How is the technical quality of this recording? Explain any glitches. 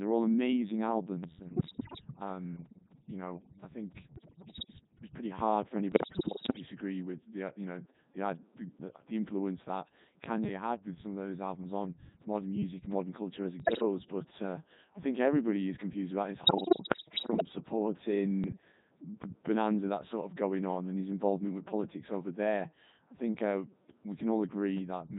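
Quality's poor: the whole speech clip runs through a heavily strained Codec 2 vocoder at 3.2 kbit/s. It rebuilds the voice from pitch, voicing, energy and a spectral envelope using synthetic sine waves rather than keeping the waveform, so everything sounds buzzy and robotic.

On top of that there are bit errors on digital voice radio at 1.43–2.01 s, 4.16–4.73 s, 5.92–6.66 s (just before "with the uh you"), 13.60–13.82 s (after "modern culture as"), 16.44–17.45 s (after "is confused about his") and 18.44–18.72 s. Flipped bits, up to roughly one in ten, corrupt the frame parameters, so the voice lurches in pitch, level and tone, breaking into warbly robotic gibberish.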